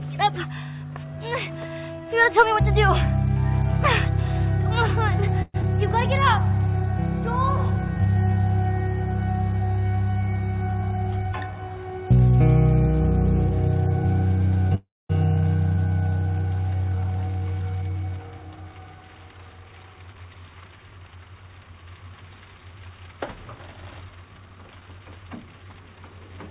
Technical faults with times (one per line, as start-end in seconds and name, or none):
5.42-5.56 call audio freeze
5.62-5.65 skip ahead
6.49-8.03 jitter buffer slow-down
10.82-11.68 jitter buffer speed-up
14.75-15.11 call audio freeze
16.90-18.38 jitter buffer speed-up
20.84-21.66 jitter buffer speed-up